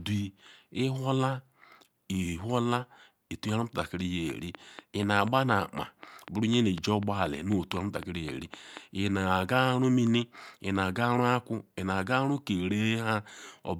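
A train of clicks runs from 4.30 to 8.78 s: around twenty near-identical pulses at a regular 4 per second, peaking roughly 10 dB above the speech. They tick steadily through words and pauses alike, likely from interference pickup or a faulty connection or power supply.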